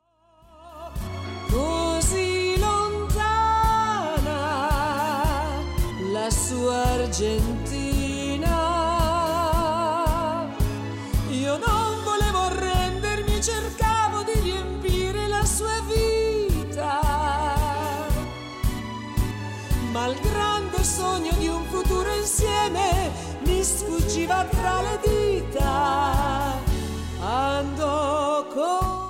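No technical faults can be heard anywhere in this clip. Nothing in the audio stands out as a problem at any point.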